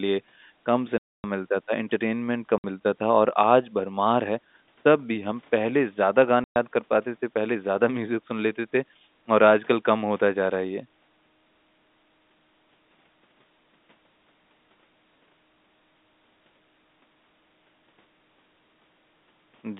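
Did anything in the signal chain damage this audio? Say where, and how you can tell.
Yes, at the network stage: packet loss filled with silence cuts the speech at 0.98 to 1.24 s, 2.58 to 2.64 s and 6.44 to 6.56 s. The dead gaps of 260, 60 and 120 ms, all multiples of 20 ms, fit lost 20 ms packets. Their edges are hard, and the G.711 telephone coding stays narrowband.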